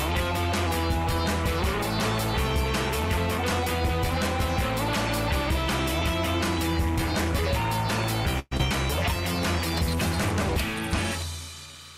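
Linear timecode running at 30 frames per second leaks in throughout as timecode bleed, adding a chirping warble near 1 and 2 kHz, roughly 25 dB below the sound. From 8.39 to 8.53 s, a call audio freeze, likely from delayed packets draining the jitter buffer, stretches the last sound into a fading buzz for 0.12 s, after which the audio resumes later with nothing missing. From 8.57 to 8.61 s, short concealed packet loss fills about 20 ms with continued sound while 60 ms is dropped as playback catches up, giving a brief smear.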